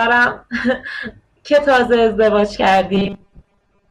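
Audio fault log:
2.94–3.91 s, robotic sound from repeated short buffers: the speech turns into a rigid, metallic buzz fixed at 200 Hz that only loosely tracks the words, running to the end of the clip. The likely cause is audio arriving too seldom, so the playback fills most of this stretch by looping the last chunk while the real audio is skipped. The 200 Hz buzz points to a repeat every 5 ms.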